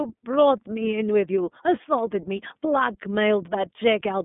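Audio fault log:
throughout iLBC codec: speech sounds plainly rough and synthetic, with nothing above 3.8 kHz, because each 30 ms frame's excitation is coded independently in a narrow band.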